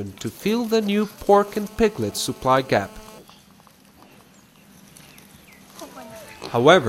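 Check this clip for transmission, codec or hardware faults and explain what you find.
One hardware fault is present: GSM phone buzz from 1.29 s to 3.19 s. A nearby 2G phone in a call transmits radio bursts 217 times a second, and the audio circuitry rectifies them into a steady, harsh, raspy buzz about 25 dB below the sound. On a spectrogram it shows as evenly spaced horizontal lines at 217 Hz and its many harmonics across that span. The waveform carries a regular pulse train riding on the signal.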